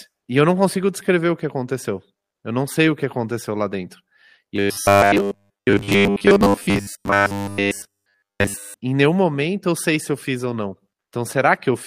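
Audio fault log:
4.56 to 8.77 s, robotic sound from repeated short buffers. The speech turns into a rigid, metallic buzz pitched at 100 Hz. It still loosely tracks the speech. The likely cause is audio arriving too slowly, so the player loops the last short block to fill the gap. A 100 Hz buzz fits a block of about 10 ms. Around seven tenths of this stretch is repeated material, while the missing audio is skipped.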